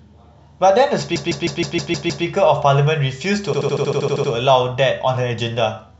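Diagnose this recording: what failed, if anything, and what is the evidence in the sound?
The speech stutters twice: from 1.15 to 2.25 s a 0.16 s slice plays seven extra times, then from 3.53 to 4.31 s a 0.08 s slice plays ten extra times. These are repeated frames at the codec stage: coded frames reached the decoder more than once, stretching the audio.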